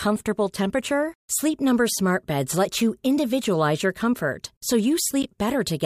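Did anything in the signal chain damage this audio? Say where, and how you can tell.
Yes. The damage is in the codec stage, where a corrupt frame was decoded. From 5.23 to 5.26 s, just after "individualize your comfort so", there is a short burst of misplaced energy peaking at roughly -15 dBFS. Its length of about 30 ms fits a single compressed frame. Flipped bits in that frame led the decoder to misread gains or spectral codes, and it played the frame anyway, putting energy at the wrong frequencies for one frame's duration.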